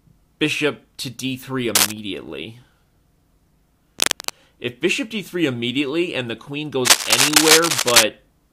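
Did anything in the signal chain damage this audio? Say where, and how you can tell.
Yes. Three bursts of cable scratch noise sit over the sound: a short rasping rustle from 1.75 to 1.92 s, another from 3.99 to 4.30 s, and a longer stretch from 6.85 to 8.04 s. The first and last are a few dB louder than the signal itself, and the middle one is roughly as loud. The dense, uneven crackle points to the analogue wiring stage, likely a worn cable or connector being moved so that its contact resistance fluctuated rapidly.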